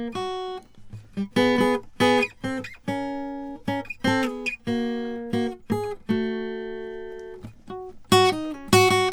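No technical faults can be heard anywhere in the music.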